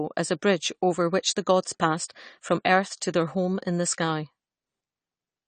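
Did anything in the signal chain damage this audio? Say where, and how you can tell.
Yes, the codec stage. The speech is band-limited with nothing above 9 kHz, and it has a dull, smeared quality with a fizzy, warbling texture on sibilants and sustained sounds that is plainly audible throughout. This is likely AAC compression, with the sound pointing to a low bitrate of around 32 kbps. A simple analogue low-pass or resampling filter would give the same top-end cut but leave the band below it clean, without the warble caused by coarse quantisation across frequency lines.

The same codec produced pre-echo at 2.08 s, between "over which the gods" and "from earth to their". A short hiss of about 15 ms comes just ahead of an onset, and the attack sounds softened. The transform block holding that sharp onset spread its quantisation noise evenly, so noise scaled for the loud part fills the quiet lead-in. 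A click or dropout would be a single discontinuity, but this is a short smear of noise tied to the attack.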